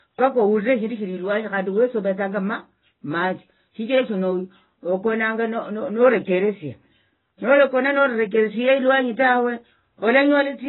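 From start to finish the speech is band-limited, with nothing above about 3.9 kHz, and sounds dull, smeared and warbling, with a fizzy edge on sibilants. This is likely heavy AAC compression, AAC-LC at a rate that fits roughly 16 kbps, stripping highs and leaving spectral holes.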